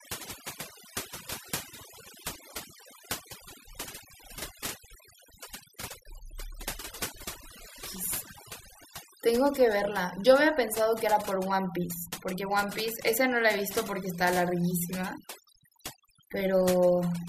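Overdone noise removal runs throughout the speech. A noise reducer set far too aggressively drives individual frequency bands down whenever they sit near its noise estimate, taking quieter parts of the voice too, so pauses fall to near silence flecked with twinkling specks.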